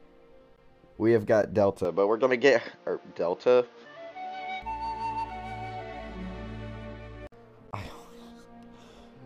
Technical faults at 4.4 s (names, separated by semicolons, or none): input switched to a poorer device